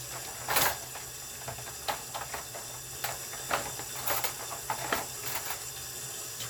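No technical faults are audible anywhere in this audio.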